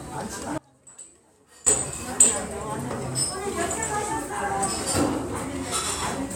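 From 0.58 s to 1.67 s the everyday sound suddenly drops out to a faint residue about 25 dB down, likely a signal path that was interrupted while the chain after the break stayed live. The waveform shrinks abruptly to a thin band, and the spectrogram dims to a pale trace with hard vertical edges rather than a fade.

At 2.33 s and again at 5.10 s, a block of digital silence cuts in: 1.45 ms, which fits a 64-sample block, then 2.9 ms, which fits 128 samples. Each sounds like a sharp tick. The waveform shows a brief flat gap, and the spectrogram shows a thin broadband stripe at each edge.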